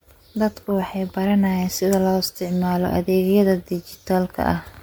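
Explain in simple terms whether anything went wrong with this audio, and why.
Yes: the speech sounds swirly, hollow and smeared from start to finish, with blurred attacks. That's generation loss, likely from being re-saved as MP3 around ten times.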